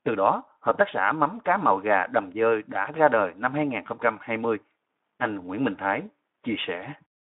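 No technical faults can be heard anywhere in this speech clip. It comes through the Speex codec at a light setting, which fits about 15 kbps, within a narrow line band of roughly 150 Hz to 3.6 kHz.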